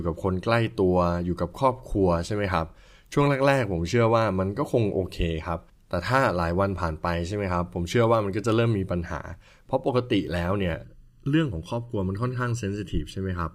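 From 10.84 s to the end, the speech turns hollow and phasey, as if heard through a tube, with a fixed coloration that doesn't move with the sound. This is channel delay (comb filtering): one channel arrives less than a millisecond late, and when the two are summed to mono, the shared content cancels at evenly spaced frequencies. The first notch sits around 700 Hz, with further notches repeating above it.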